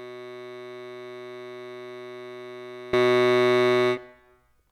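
From the start to 2.93 s the music collapses by about 20 dB when heard summed to mono, the centre and low end nearly gone and only a faint, hollow residue of the mismatch between channels left. The likely cause is one channel inverted, so material shared by left and right cancels. Unlike a plain level drop, the balance itself changes, and unlike a high-pass filter, centred upper content disappears along with the bass.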